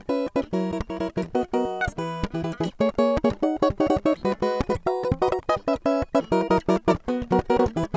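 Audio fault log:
throughout wrong sample rate: the music runs at twice its proper speed and sits a full octave (12 semitones) high, which fits 8 kHz material played back at 16 kHz. Tempo and pitch rise together by the same factor of 2.0, unlike a pitch shift or time-stretch, which would change only one.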